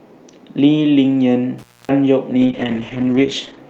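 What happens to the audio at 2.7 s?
At 2.7 s the audio is inside a call bitrate drop that runs from 2.43 s to 3.65 s. The call's bandwidth estimate fell, so the encoder was pushed to a far lower rate, which fits a step from around 48 kbps down to around 10 kbps. The audible band narrows from 20 kHz to about 8 kHz, and the coarser coding leaves the speech muffled and rough for roughly 1.2 s.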